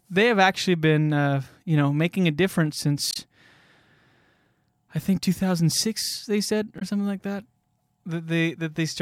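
Damaged data in a compressed stream, at 3.11 to 3.17 s and again at 6.78 to 6.82 s: corrupted bytes leave the decoder unable to read those frames, so it loses sync and hunts for the next valid header, producing a short glitch or hole in the speech each time.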